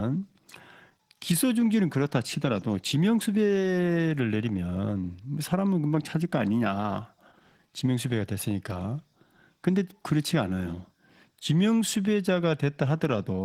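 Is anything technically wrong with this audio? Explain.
Yes. Throughout the speech, Opus voice compression at a low bitrate, which fits about 16 kbps in hybrid mode, leaves the linear-prediction layer coarsely coding the excitation below 8 kHz while CELT thinly covers the band above. The speech is audibly hoarse, grainy and slightly robotic.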